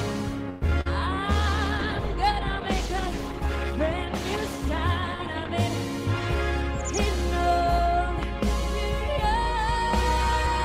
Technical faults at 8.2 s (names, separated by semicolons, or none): loud pop